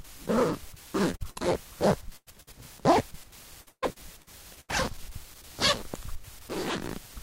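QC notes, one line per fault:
1.11–1.15 s, short concealed packet loss: about 20 ms never arrived, so the receiver stretched the previous sound over the hole, leaving a brief smear.
1.15–1.22, 1.30–1.40, 2.17–2.28 and 2.42–2.49 s, burst of packet loss: gaps of 40 to 100 ms were covered by carrying the last sound on and fading it, so you get a held buzz or dying hiss before the audio resumes further on.
3.61–4.71 s, repeated packet loss (robotic sound): six gaps, the longest about 140 ms, each patched from the last sound, with roughly a third of the stretch synthetic, so it comes out choppy with pieces missing.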